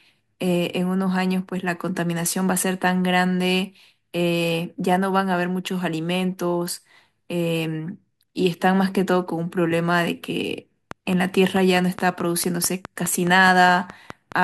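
From 10.91 to 14.33 s a train of clicks ticks evenly at 4.7 per second, around fifteen near-identical pops well above the speech, likely interference, unlike random crackle.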